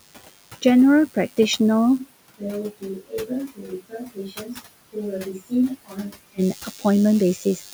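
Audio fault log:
Throughout: DECT cordless phone buzz. A thin, steady buzz sits under the speech at about 20 dB below it, pulsing at 100 Hz with a dense stack of harmonics above. A nearby DECT handset or base transmits a short radio burst every 10 ms, and a stage in the audio path rectifies that burst into the signal, so the repetition rate becomes an audible tone. The room's own background noise, around 20 dB under the speech, is heard separately from it.
2.00 to 6.37 s: switch to a distant microphone. At 2.00 s the speech suddenly turns roomy and hollow, loses low end and drops by roughly 10 dB, while the room noise sits about 35 dB below it. At 6.37 s the close sound returns just as abruptly. The likely cause is that the close microphone's feed dropped out and a farther microphone, such as a camera's, carried the recording for that span.
3.00 to 7.64 s: speech cut by the noise suppressor, six events at 3.00 to 3.30, 3.48 to 3.72, 3.89 to 4.59, 5.87 to 6.17, 6.61 to 6.85 and 7.38 to 7.64 s. 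Quiet parts of the speech are pulled down with the background by 9 to 16 dB, so endings and soft consonants sound swallowed. The longest affected stretch totals roughly 300 ms, near 3.9 to 4.6 s. The suppressor mistook low-level speech for noise.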